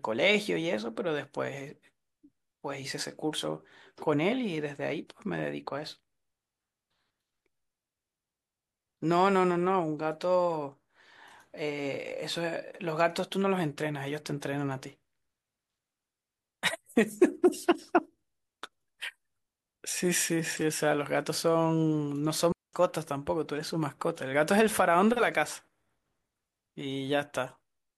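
At 22.52 s a digital wireless dropout mutes the speech for about 0.21 s, a clean near-silent hole with no noise burst. The waveform shows a flat gap and the spectrogram a blank vertical band.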